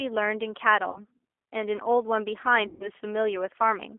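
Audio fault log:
Throughout: G.729 codec. The speech is squeezed into a line band of 300 Hz to 3.5 kHz and has a plainly rough, slightly synthetic edge, because a low-rate coder rebuilds it from a filter, pitch predictor and a few pulses per frame, which fits 8 kbit/s G.729A.
0.90–1.01 s and 2.68–2.90 s: VoIP packet loss concealed by the speech codec. Roughly 60 ms, then 120 ms, went missing. The decoder kept extending its last pitch and filter at falling gain, so the speech smears into a fading buzz or coloured noise and stays weak just after each gap.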